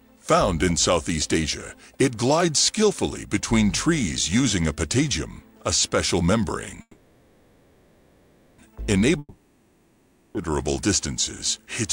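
Running under the whole clip there's a video or display buzz: a screen or video cable is leaking into the audio, giving a 59.94 Hz buzz with hash on top, plus a faint whine at 15.7 kHz from the line rate, all sitting roughly 40 dB below the sound.

At 6.81 s the audio hangs. The last bit of sound drags on as a fading buzz, dropping to near silence, until it resumes at 8.60 s exactly where it left off. That's a call audio freeze, likely packets stalling in transit and the jitter buffer running dry, so about 1.77 s of delay gets inserted but nothing is lost.

Then at 9.19 s it happens again, but this one's a long network dropout. The sound smears into a decaying buzz and then goes quiet, and when audio comes back at 10.52 s it has skipped ahead, with about 1.16 s never played.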